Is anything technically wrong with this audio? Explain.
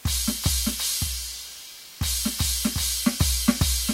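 Yes. Low bit depth with dither runs throughout the music: it is held to about 7 bits, with dither added before rounding. The dither turns the rounding error into steady white noise, so instead of distortion there is a constant, even hiss roughly 20 dB below the music.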